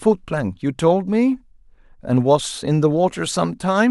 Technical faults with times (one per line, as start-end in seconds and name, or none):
none